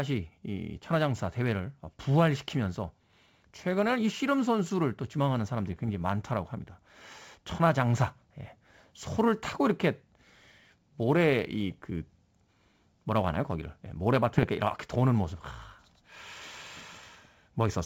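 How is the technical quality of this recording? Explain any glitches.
The recording has a constant background roughness from sample clock jitter and four short bursts of damage from bit errors on an ADPCM link. It carries G.722 wideband telephone coding, and its clear band up to about 7 kHz with little added noise fits the full 64 kbit/s mode.

Sample clock jitter runs through the whole clip. The converter's clock wanders by a few microseconds, so each sample is captured slightly off its proper instant. The resulting error scales with how steeply the waveform is changing, which puts it around 35 dB below the speech. You hear it as a hiss or grain that thickens on loud and bright sounds and drops away in pauses.

Bit errors on an ADPCM link strike four times: 0.79 to 0.93 s, 5.67 to 6.01 s, 11.72 to 11.91 s, and 14.34 to 14.49 s. A fraction of a percent of the transmitted bits were corrupted. 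Each wrong bit misleads the decoder's step size and predictor, so the damage keeps ringing for several milliseconds after the flip itself. The result is pops and rough, crackly bursts with brief jumps in level.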